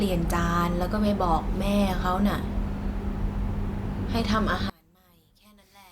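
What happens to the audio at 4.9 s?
At 4.9 s the speech collapses to a faint residue. From 4.70 s to the end of the clip at 5.91 s, the level drops by about 33 dB. The likely cause is one channel inverted: with one stereo side's polarity reversed, the centred voice cancels when the channels are summed to mono, leaving only their small difference. On the waveform, the amplitude shrinks abruptly at 4.70 s. A spectrogram shows the energy nearly vanishing there.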